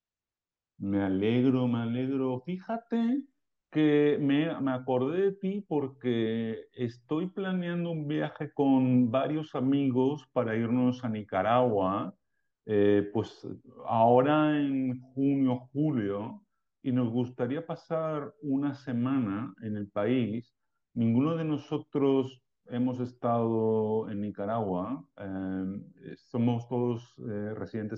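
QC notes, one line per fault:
Nothing stood out on listening to the speech at any point.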